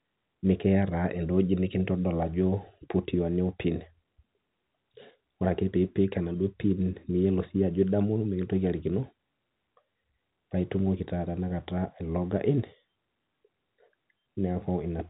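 No faults heard in this speech recording; the G.711 telephone coding path is working normally, with nothing above about 3.9 kHz, as that format allows.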